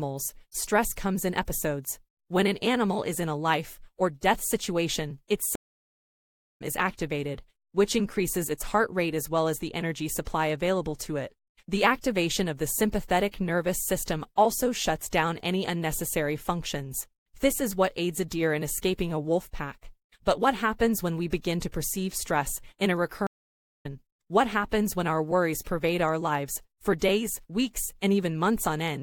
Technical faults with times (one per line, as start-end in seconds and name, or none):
5.55-6.62 stream reconnect
23.27-23.86 stream reconnect